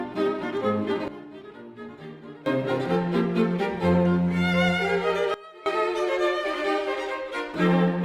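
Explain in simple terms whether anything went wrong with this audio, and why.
Two sudden gain jumps: from 1.08 to 2.46 s and from 5.34 to 5.66 s, the sound and background drop sharply together, likely a volume switch with no fade.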